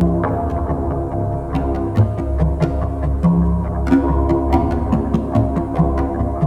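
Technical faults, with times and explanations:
Throughout, channel delay (comb filtering): one channel arrives roughly 10 ms behind the other, and when the two are folded to mono, the content they share cancels at a series of evenly spaced frequencies, starting low, near 40 Hz. That fixed pattern of gaps leaves the sound hollow and phasey. On a spectrogram it shows as thin horizontal dark stripes that stay put for the whole clip; the waveform looks normal.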